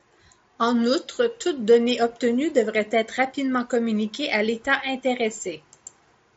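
No faults are audible in the speech, which carries the wideband limit of an mSBC Bluetooth headset link, with nothing above 7.7 kHz and a light codec grain on the louder passages.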